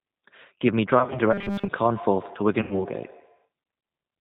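The whole clip runs through the G.729 codec at 8 kbit/s, and you can plainly hear it: the speech is rebuilt from a filter, a pitch predictor and a few pulses per frame, so nothing gets through above 4 kHz and the voice comes out a bit rough and synthetic.

From about 0.99 to 1.19 s there's VoIP packet loss concealed by the speech codec. Around 90 ms of audio went missing, scattered over roughly 160 ms in runs no longer than 20 ms, which points to nine lost frames. The decoder papers over each gap by extending its last pitch and filter, so the sound is briefly stretched into a buzzy tone or coloured noise, turns weak and takes a moment to firm up again.

Between 1.33 and 1.69 s the audio turns into a rigid, metallic buzz at 200 Hz that still roughly follows the speech. This is robotic sound from repeated short buffers, most likely caused by audio arriving too seldom while the software loops the last 5 ms chunk. 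Most of that stretch is repeated material rather than the real signal.

The same packet-loss concealment shows up again from 2.62 to 2.85 s, with about 90 ms lost. The sound is again stretched into a fading buzzy tone or coloured noise, and the speech sounds thin for a bit afterwards while the decoder rebuilds its state.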